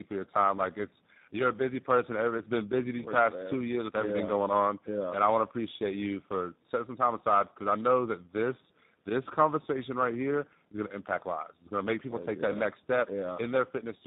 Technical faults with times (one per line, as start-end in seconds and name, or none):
0.00-14.06 tandem speech coding